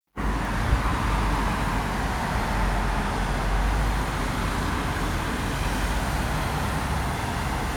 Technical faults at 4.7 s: none

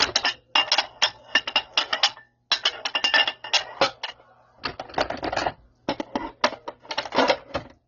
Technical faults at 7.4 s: transcoding between lossy codecs

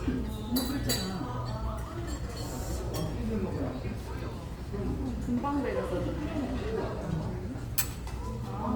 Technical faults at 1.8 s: Opus compression

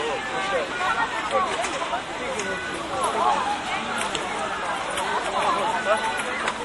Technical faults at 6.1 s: MP3 compression

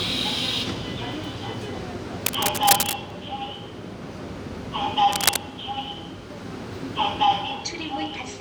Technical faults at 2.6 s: cable scratch noise

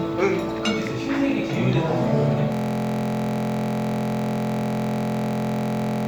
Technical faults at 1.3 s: none

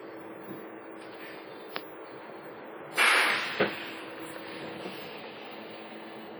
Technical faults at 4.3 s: WMA compression

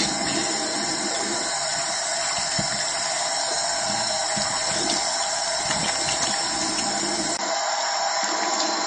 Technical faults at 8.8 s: MP3 compression; input switched to a poorer device

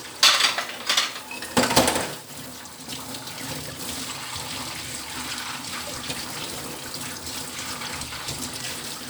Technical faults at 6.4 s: periodic USB or driver dropouts

